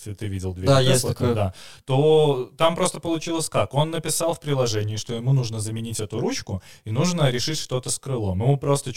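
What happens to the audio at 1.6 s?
At 1.6 s you're hearing channel delay (comb filtering), and it isn't a one-off: it runs through the whole speech clip. One channel trails the other by around 20 ms, so when the two fold down to mono, the shared content cancels at regularly spaced frequencies, starting somewhere near 20 Hz and repeating up the spectrum. With a delay that long, the speech comes across as rough and slightly doubled.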